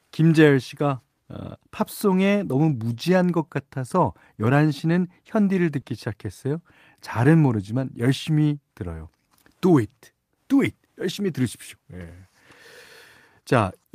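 At 1.81 to 1.83 s and again at 2.69 to 2.71 s, the speech briefly turns rougher and noisier for about 20 ms, which fits a single lost packet each time being rebuilt from error correction. The following packet carried a low-bitrate copy of the missing frame, so the decoder played that instead of leaving a gap. On a waveform there is no dropout. On a spectrogram those 20 ms look coarser and smeared, with less clean harmonic structure.

At 5.81 to 5.85 s comes a short concealed packet loss. About 20 ms of audio never arrived in time, and the receiver filled it by extending the preceding sound before blending back into the real signal. It is heard as a quick smear or wobble. A waveform shows a brief stretch that continues the previous sound rather than following the true contour.

At 7.81 to 7.83 s there is one more lost packet rebuilt from error correction, again about 20 ms of rough, noisy texture with no gap, and the same coarse, smeared patch on a spectrogram.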